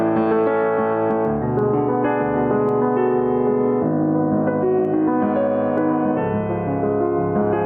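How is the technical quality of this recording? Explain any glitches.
The recording is compromised by gain pumping that runs through the whole piece of music. The input gain was likely set far too high, so a fast limiter clamps down on every loud hit. The gain swings by around 10 dB, ducking under each peak, squashing the dynamics.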